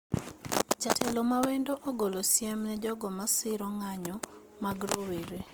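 Throughout the speech, the audio was likely squeezed through Opus compression in its CELT music mode at a low rate, which fits about 24 kbps. Starved bands are refilled with folded or noise content, so tones sound plainly grainy and rough, though full bandwidth reaches 20.2 kHz.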